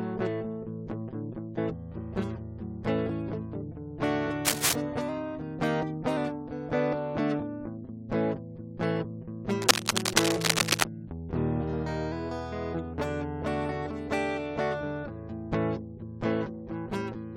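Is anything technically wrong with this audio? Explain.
Yes, there are three kinds of problem in this music.

First, a stream segment skipped at about 1.57 s. The music jumps forward with a tiny blip, as if a chunk went missing and playback carried on from the next piece. That's likely a segment of a segmented stream that failed to load, so the player just moved on to the following one and the passage lurches ahead.

Then there's cable scratch noise, from 4.45 to 4.73 s and again, longer, from 9.62 to 10.84 s. Both times you get a dense, uneven scratchy rustle riding around 5 dB above the music. The likely cause is a worn cable, connector or control being moved, with its contact resistance jumping around rapidly and dumping those ragged noise bursts into the signal.

Finally, two drift correction steps. From 5.09 to 6.17 s the music suddenly runs about 5.6% fast and goes sharp by roughly 94 cents, nearly a semitone, then snaps back. 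From 11.37 to 12.12 s it does the opposite: about 5.6% slow and around 99 cents flat. This is likely clock-matching software changing the playback rate in one jump to refill or drain its buffer. Speed and pitch move together, so the whole thing sounds briefly detuned.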